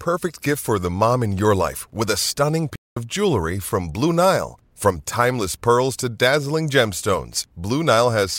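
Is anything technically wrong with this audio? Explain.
Yes. At 2.75 s the speech cuts to silence mid-flow for about 210 ms, picking up again at 2.97 s. This playback stall is likely the player running short of buffered data or having its thread blocked, so output halted until it recovered.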